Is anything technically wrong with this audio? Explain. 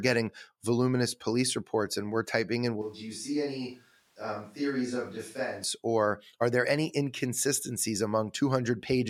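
Yes. From 2.82 to 5.64 s, the close microphone's feed likely dropped out and a farther pickup took over, a switch to a distant microphone. The speech abruptly turns hollow and roomy, thinner in the bass, about 5 dB quieter, with more room noise, then snaps back.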